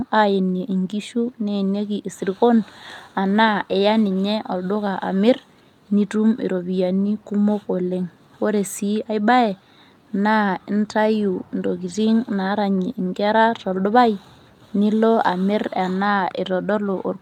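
No technical faults can be heard anywhere in this recording.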